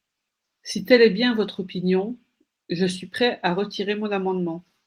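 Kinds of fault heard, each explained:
No kinds of fault are heard in the speech.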